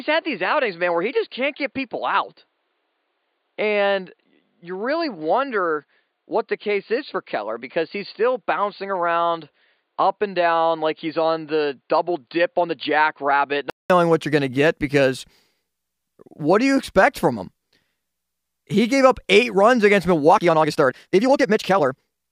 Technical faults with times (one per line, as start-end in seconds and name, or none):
0.00-13.90 input switched to a poorer device
20.26-22.32 time-stretched section